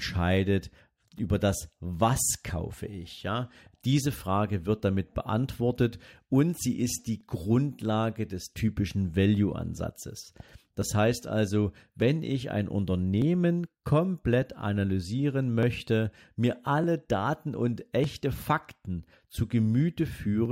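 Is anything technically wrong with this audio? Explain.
Yes. From about 1.19 s to 20.45 s the speech carries a regular tick every 1.21 s, roughly fifteen in all. That steady spacing is the signature of clock drift buffer slips: two devices are likely running on separate clocks that disagree by something like a tenth of a percent. The buffer between them creeps until a few dozen samples get dropped or repeated, and each jump in the waveform comes through as a click or pop over the talking.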